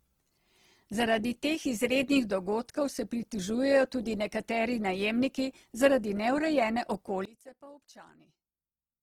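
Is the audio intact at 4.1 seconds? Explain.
No. At 4.1 seconds the speech sounds rough and grainy, with a noisy, hissy texture laid over voiced sounds, and it stays that way across the whole clip rather than appearing only at that moment. The likely cause is Opus compression in its music-style CELT mode. Short of bits, the encoder keeps each band's overall energy but fills the fine detail with folded copies of lower bands or with noise. The full bandwidth survives, and the plainly audible damage points to a low bitrate near 16 kbps.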